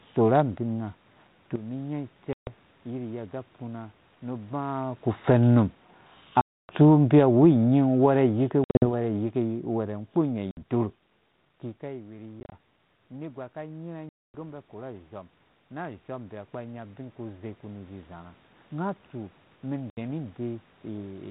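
Speech heard through a 4 kHz telephone band, with the light, level-following hiss that fits 32 kbit/s G.726 ADPCM, drops abruptly at 1.56 s by about 12 dB, voice and background together, and stays down to the end. This sudden gain jump is likely a gain setting applied in one step with no ramp. Seven hard-edged silent holes follow, each followed by slightly distorted speech as the sound resumes: 2.33 s (140 ms), 6.41 s (280 ms), 8.64 s (150 ms scattered over 180 ms, longest gap 60 ms), 10.51 s (60 ms), 12.40 s (80 ms scattered over 120 ms, longest 30 ms), 14.09 s (250 ms) and 19.90 s (70 ms). This is packet loss on an ADPCM call: the missing packets become silence, and the decoder's adaptive predictor and step size lose step with the sender's, so it takes some tens of milliseconds to settle. From 5.14 to 11.01 s the speech and room noise sink together by about 10 dB. This is automatic gain falling, where the gain control judged the input too loud or its background noise too strong and eased its gain down. 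After the talker moves away around 11.5 s and the input drops by about 18 dB, voice and background swell by about 10 dB between 11.96 and 18.44 s. This is automatic gain rising, as the control compensates gradually for the quieter input.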